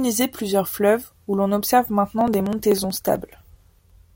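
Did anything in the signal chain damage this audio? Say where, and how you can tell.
Yes. The damage happens at the driver or USB transfer stage: from 2.21 s to 4.10 s the speech carries periodic USB or driver dropouts, about thirty small ticks spaced exactly 0.063 s apart, roughly sixteen per second. Each one skips around a millisecond of audio outright rather than filling it with silence, so the waveform jumps and clicks. The strict regular spacing points to a recurring background task stalling the bus or driver, not random network packet loss or analogue crackle.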